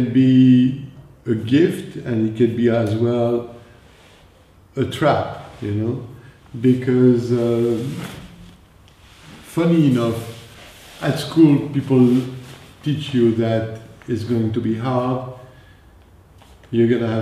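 No technical faults are audible anywhere in the recording.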